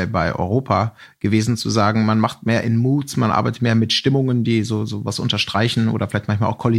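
A speech recording with no technical faults to point to. Nothing in it calls for a time or a cause.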